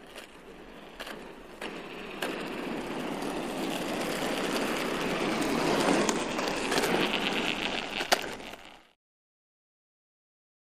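No technical faults are audible.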